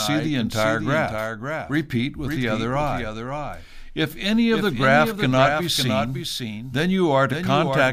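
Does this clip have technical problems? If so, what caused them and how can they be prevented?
Yes. The speech carries a doubled audio track for the whole clip: a second full-band copy of everything trails the original by roughly half a second, sitting about 5 dB lower, with no decay or room colouring. The likely cause is the same signal being captured twice, once through a slower monitoring or return path, or an edit leaving two misaligned copies stacked. To prevent it, route each source to the recording only once and mute return or loopback paths.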